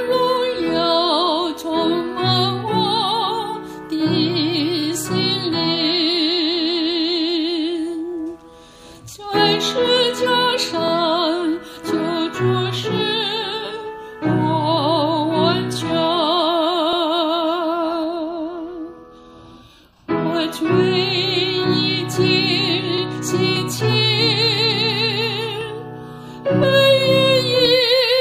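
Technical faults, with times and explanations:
4.83, 10.88, 16.93 and 22.98 s, overlapping chunks: each block of about 6 s begins 50 ms before the previous one ended, so that slice plays twice, giving a stutter.
23.56 to 27.65 s, periodic USB or driver dropouts: something blocks the audio path every 1.02 s and a couple of milliseconds are skipped, heard as about five evenly spaced ticks.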